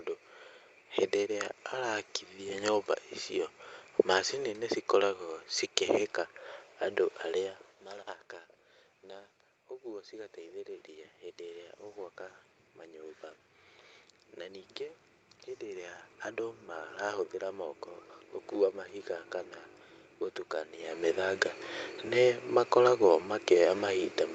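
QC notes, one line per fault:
9.01–11.79 s and 12.92–17.84 s, automatic gain rising: after the input drops about 14 dB, the gain climbs about 5 dB, then about 6 dB before "gũkua mahiga kana", so voice and room noise swell together.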